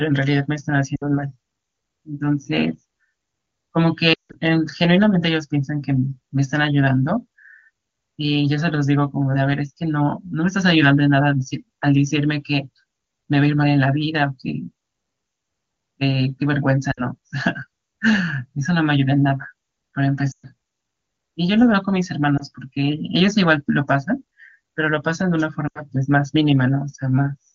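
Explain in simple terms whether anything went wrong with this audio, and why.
Something did go wrong. The speech briefly breaks up six times: at 0.95 to 1.04, 4.13 to 4.36, 16.91 to 17.03, 20.31 to 20.47, 22.37 to 22.44, and 25.67 to 25.82 seconds. These are lost AMR speech frames. Radio errors spoiled small chunks of the call. The phone's decoder then filled each gap by repeating the last good sound, growing quieter. The single lost frame near 22.4 seconds sounds like a quick dip or wobble. The longest, near 4.1 seconds, quickly drops to near silence before the speech returns.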